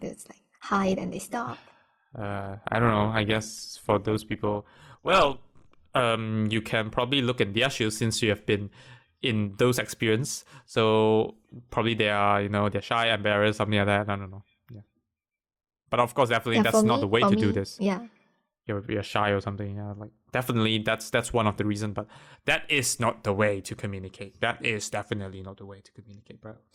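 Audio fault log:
0.0–6.0 s, adaptive stream starting at a low bitrate: the speech opens thin, nothing above 12.2 kHz, with heavier codec smearing, which fits Opus near 16 kbit/s. The player then switched to a richer stream, likely 64 kbit/s, and treble returns abruptly, without a gap, before "you can probably look".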